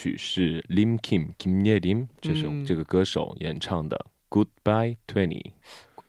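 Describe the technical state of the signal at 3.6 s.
At 3.6 s the speech signal is intact, with no dropout, distortion, glitch or other fault audible at that point.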